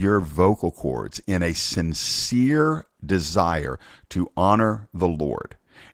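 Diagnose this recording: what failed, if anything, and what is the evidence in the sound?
Codec stage: Opus voice compression throughout the speech, plainly audible as a hoarse, slightly robotic edge. That fits a hybrid SILK-plus-CELT mode near 16 kbps, with coarse excitation coding.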